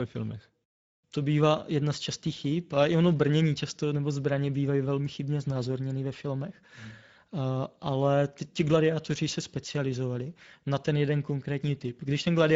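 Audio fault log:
throughout: Speex codec. The speech has a hoarse, noisy grain that is plainly audible. This CELP coder rebuilds each sound from a predicted filter and a coded excitation, and the excitation is short of bits here. The damage fits a middle quality setting near 17 kbps. Nothing is present above 7.7 kHz. The band from 4 kHz up to that edge carries only a shaped, noise-like fill, not true detail.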